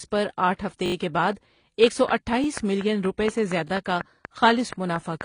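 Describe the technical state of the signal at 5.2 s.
At 5.2 s the signal carries the last clicks of a train of clicks that runs from 1.84 s to 5.22 s. Evenly spaced pulses of much the same shape arrive about 4.2 times per second, around fifteen in all, peaking roughly 15 dB above the speech. They tick steadily over the sound and through pauses, most likely from electrical interference or a struggling interface. Underneath, the speech shows transcoding between lossy codecs. Nothing is present above 10 kHz, and two layers of artefacts are heard together: the smeared, synthetic upper band of a low-rate spectral-replication stage, re-encoded with its own added artefacts. That points to a chain of about HE-AAC near 24 kbit/s followed by AAC-LC near 32 kbit/s.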